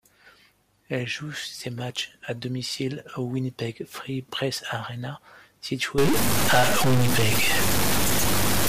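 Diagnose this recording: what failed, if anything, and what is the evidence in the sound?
A stuck bit starts at 5.98 s and runs to the end of the speech. From there the sound turns harsh and buzzy, and the pauses fill with loud noise. The likely cause is a converter or data line holding one fairly high bit fixed, shifting about half the samples by a step of roughly -15 dBFS.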